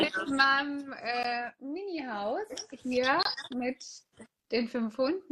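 Gaps between stream segments cut the audio at 1.23 s and from 3.23 to 3.25 s: hard-edged silences of about 14 ms and 25 ms. Spaced 2 s apart, they fit 2-second segments whose timestamps don't quite meet, leaving holes the player pads with silence.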